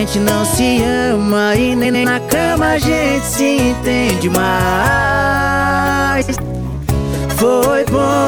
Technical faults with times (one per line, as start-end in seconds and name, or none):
1.84-2.05 frames out of order
6.21-6.37 frames out of order